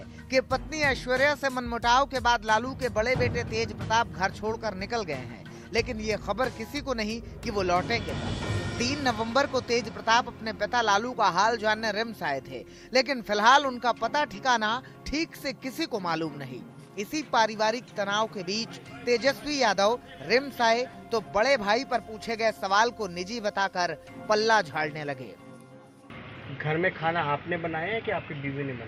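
Nothing stood out on listening; no technical problems could be heard anywhere in the audio.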